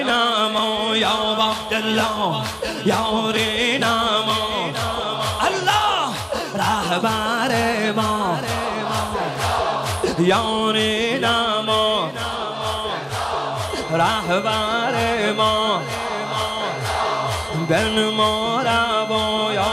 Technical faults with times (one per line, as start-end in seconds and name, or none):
13.70-19.72 switching supply whistle